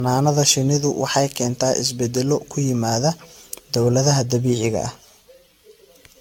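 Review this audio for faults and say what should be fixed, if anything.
Generation loss runs throughout the speech: swirly, hollow smearing and blurred consonant onsets, likely from around fifteen re-encodes consistent with AAC-LC near 96 kbit/s. A spectrogram shows patchy holes and a hard ceiling at 17.4 kHz; transients look softened. Encode once from the original source instead of transcoding.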